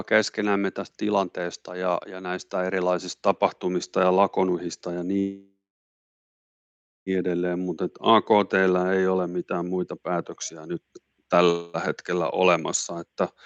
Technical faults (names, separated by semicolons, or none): call audio freeze